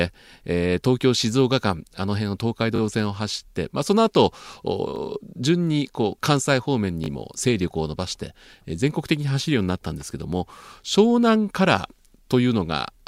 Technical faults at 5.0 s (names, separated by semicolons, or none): repeated buffer